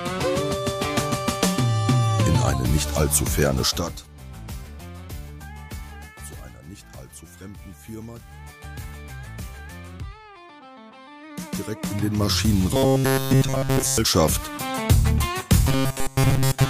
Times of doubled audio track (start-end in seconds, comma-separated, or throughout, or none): none